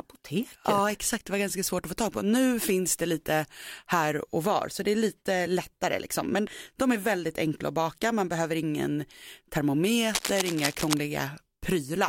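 A worn cable or connector was likely moved from 10.14 to 10.97 s, producing cable scratch noise: dense, uneven rustling bursts nearly as loud as the speech.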